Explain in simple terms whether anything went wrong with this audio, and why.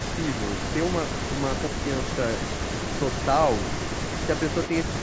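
Echo leak, from 0.0 to 3.26 s and again from 3.51 to 5.0 s: a faint copy of the speech trails the original by about 0.15 seconds. The likely cause is a loudspeaker on one end whose echo canceller let some sound back into the microphone.

Speech suppressed in double talk, at 1.69 to 1.74 s: the speech briefly dips for about a twentieth of a second. This likely happened because both sides talked at once, and the echo canceller turned the real talker down along with the echo.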